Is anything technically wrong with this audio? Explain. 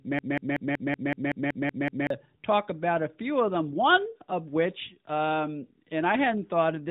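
Yes. A broken-record loop runs from 0.0 s to 2.10 s, already under way when the clip begins. A 188 ms fragment repeats exactly, back to back, ten times. The likely cause is a stalled player or stream resending its last buffered piece, so the speech that belonged there is lost. The narrowband AMR-NB sound, with nothing above about 3.8 kHz, carries through the loop.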